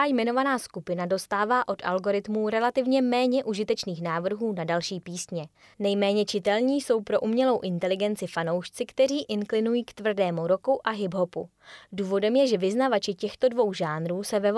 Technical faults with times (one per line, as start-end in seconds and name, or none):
none